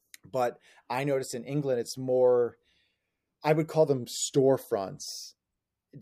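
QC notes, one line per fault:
3.87–5.02 s, drift correction step: the speech abruptly slows by 6.2% and drops 111 cents, just over a semitone, holds that offset for about 1.1 s, then snaps back to the normal rate. Speed and pitch shift together and stay level rather than wavering, which separates it from wow or flutter and from a pitch-only shift. The likely cause is clock-matching software changing the playback rate in one jump to refill its buffer.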